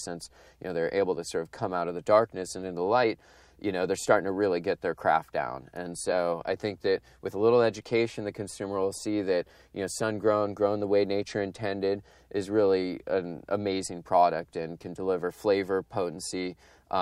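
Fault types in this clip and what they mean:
No fault types are present in this clip.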